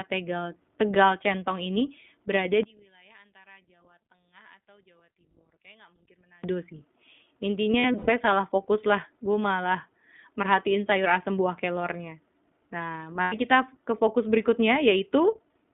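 The whole clip runs through the iLBC codec. The speech sits in a narrow telephone band of roughly 200 Hz to 3.6 kHz, and the slightly rough, synthetic edge is plainly audible. That fits the 15.2 kbps mode with 20 ms frames, each coded on its own.

From 2.63 to 6.44 s the level drops by about 28 dB, leaving a faint copy of the speech. The likely cause is one channel inverted: the centred sound cancels when the two channels are folded to mono, so only their small difference gets through.

Between 7.72 and 8.10 s, just before "salah fokus", you get lost iLBC frames. About 180 ms of audio is spread over roughly a third of a second, and the longest gap is around a tenth of a second. The decoder fills each gap by repeating the last pitch cycle with noise, so it comes out as a held, slightly buzzy or breathy vowel that snaps back straight away. A second loss at 13.22 to 13.35 s does the same for about 100 ms, which fits five frames.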